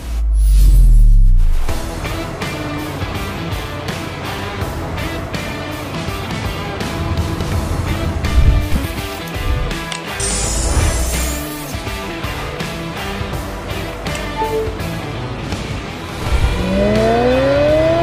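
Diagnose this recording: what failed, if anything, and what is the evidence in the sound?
Nothing in the signal chain appears to have failed: the level, timing and continuity hold steady across the recording, with no audible sign of trouble at any stage from capture to playback.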